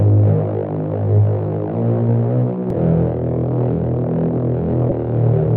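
At 2.70 s and again from 4.88 to 4.92 s, the everyday sound is broken by damaged data in a compressed stream. Corrupted bytes make the decoder misread or reject frames and lose sync until it finds the next valid frame header, so each spot gives a brief burst of garbled sound or a gap. Unlike a buffer dropout, these events come from bad data at isolated points, not from timing.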